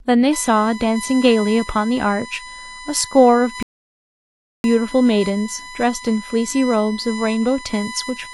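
USB whine runs from 0.33 s to the end: current drawn in 1 ms bus frames leaks into the audio as a fixed 1 kHz tone, strongest at 2 kHz, about 15 dB below the speech. A rebuffering stall from 3.63 to 4.64 s cuts to silence as the player runs dry, then resumes exactly where it stopped, adding about 1.0 s.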